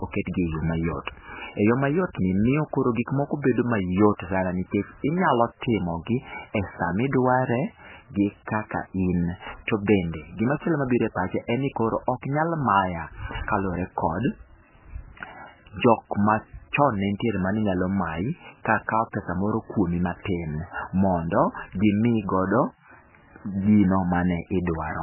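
MP3 compression throughout: the speech stops dead above 3 kHz and sounds heavily watery, likely from an encoder starved of bits, fitting roughly 8 kbps.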